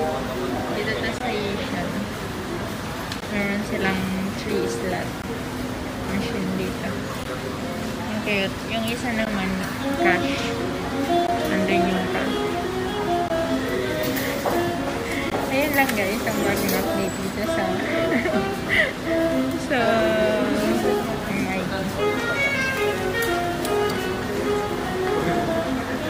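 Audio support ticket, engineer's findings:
Gap at a join of encoded pieces: separately encoded segments concatenated without trimming encoder delay and last-frame padding. Result: brief dropouts recurring every 2.0 s, at 1.18, 3.20, 5.22, 7.24, 9.25, 11.27, 13.28, 15.30 s. First about 20 ms, rest 16 ms; edges smeared by the codec, sound resumes unchanged.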